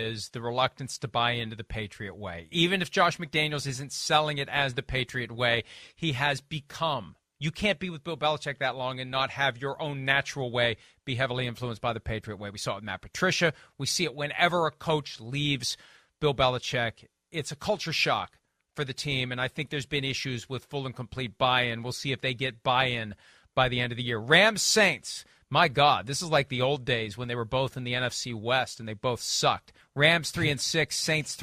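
No technical faults are audible anywhere in this recording.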